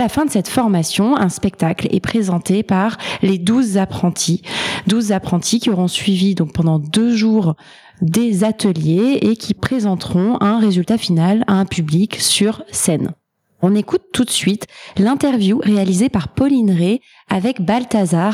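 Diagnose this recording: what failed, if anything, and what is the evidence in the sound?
Nothing in the signal chain has failed: the audio holds steady level and continuity throughout, with no dropouts, discontinuities, distortion or timing disturbances anywhere in the recording.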